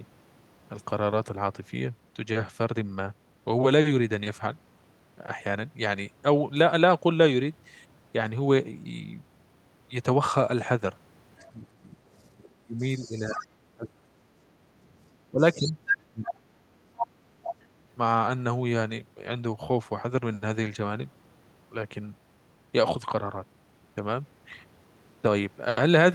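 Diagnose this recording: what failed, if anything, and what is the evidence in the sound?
Call processing failed. The other side's voice is leaking through, likely from residual loudspeaker echo the canceller missed. A faint scrap sits at 11.39 to 11.47 s. A louder stretch runs from 12.43 to 13.47 s. From 15.47 to 17.52 s it is nearly as loud as the talker.

Speech is suppressed in double talk, again in call processing. From 11.55 to 14.32 s and from 15.3 to 17.69 s, the talker dips by as much as 30 dB while the echo plays. The canceller likely could not separate the two voices, so it attenuated both.

The background is gated by the echo canceller at 14.67 s. For about 40 ms the room sound drops by about 6 dB while the loudspeaker plays. The suppressor clamped the microphone path briefly, then released it.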